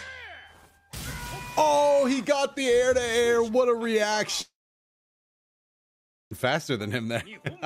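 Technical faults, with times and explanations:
4.41–6.33 s: long network dropout. At 4.41 s the sound smears into a short buzz that fades out. After about a tenth of a second it gives way to silence. The silence lasts nearly 1.8 s, until 6.33 s. The audio then picks up mid-flow, with about 1.9 s of material gone. The likely cause is a stall in the incoming stream. The receiver briefly stretched the last sound, then had nothing left to play.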